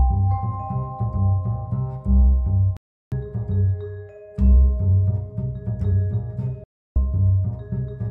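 The music suffers digital broadcast dropouts at 2.77–3.12 s and 6.64–6.96 s: the receiver muted on failed frames, leaving silent gaps of about 0.35 s and 0.32 s, seen as blank spectrogram columns and flat waveform.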